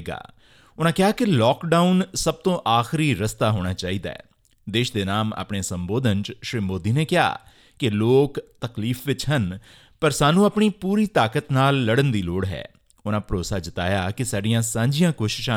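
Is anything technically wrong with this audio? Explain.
No, nothing technically wrong can be heard here.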